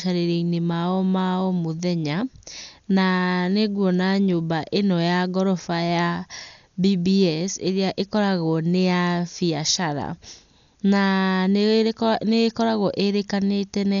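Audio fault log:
Throughout: Dolby Digital compression is the likely cause of the dull, band-limited sound of this speech, with nothing above 6.9 kHz and heavy codec damage, which fits a bitrate near 48 kbps. Starved of bits, the encoder cuts the upper band and leaves many frequency lines with no mantissa data. The decoder fills those gaps with dither noise, so a rough, fluttering grain clings around the voiced tones while the top end stays missing.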